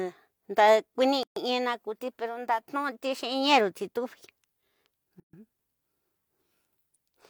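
At 1.23 s and again at 5.20 s, the speech drops out for about 132 ms: a gap at a join of encoded pieces, where separately encoded segments were spliced with their padding left in.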